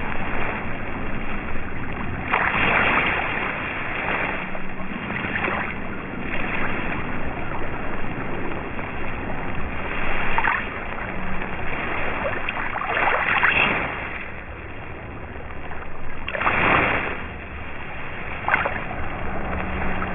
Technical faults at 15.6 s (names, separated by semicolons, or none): aliasing